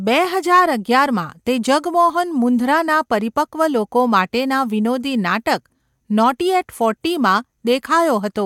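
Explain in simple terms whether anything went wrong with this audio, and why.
Nothing went wrong with this audio, because no fault can be heard anywhere in the speech.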